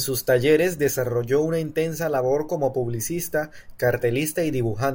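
No technical faults can be heard anywhere in the recording.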